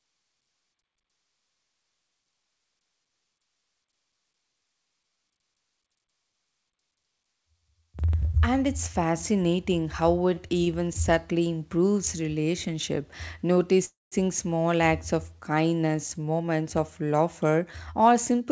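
Speech, carried over a call path whose band stops at 8 kHz, which fits a G.722 codec, shows several jitter-buffer faults. From 10.34 to 10.98 s there are repeated stalls (stutter): four short gaps, the longest 24 ms and 67 ms in all, filled by stretching the last sound. The waveform shows small smeared repeats and the spectrogram shows brief horizontal streaks. At 13.53 to 13.58 s a short stall from a late packet holds one sound for an extra 17 ms, visible as a brief frozen, flattened patch. From 13.85 to 14.15 s the audio stops for 267 ms, a fading buzz and then 180 ms of silence, most likely a call audio freeze from held-up packets. This appears as a smeared band trailing into a blank gap. From 15.89 s to the end a jitter buffer speed-up runs the speech at 107% with unchanged pitch, trimming about a fifth of a second in tiny pitch-period cuts. The result sounds hurried, with syllables packed slightly closer on the spectrogram.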